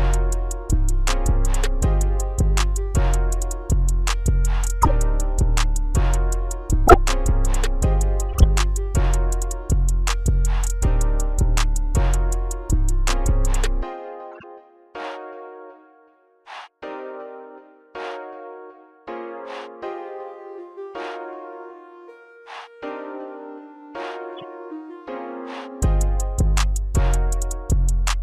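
Corrupt frames decoded at 4.82–4.91, 6.87–6.97, 8.33–8.44, 14.31–14.44 and 24.37–24.44 s. Damaged frames were played anyway, so energy lands at wrong frequencies, giving chirps, squeaks, blips or bursts of noise that look like brief misplaced spectrogram smears. The first three have error peaks of about -5, 0 and -5 dBFS, and the last two are much fainter.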